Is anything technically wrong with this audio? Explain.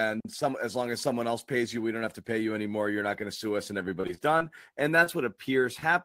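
Yes. From 4.01 to 4.42 s, after "to sue us and", repeated packet loss (robotic sound): several brief dropouts, patched by extending prior audio, make the speech choppy.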